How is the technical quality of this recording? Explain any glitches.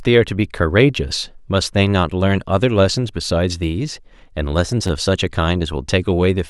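One glitch affects this speech recording: a repeated buffer between 4.88 and 4.90 s. New audio failed to reach the playback device in time, so it replayed its last block of sound twice more. Each block lasts about 10.7 ms, which fits a 512-sample buffer. The same tiny fragment therefore sounds three times in a row, with a hard join at each repeat. Because the blocks are so short, this comes across as a brief click or buzz rather than an audible stutter, and no audio appears to be lost.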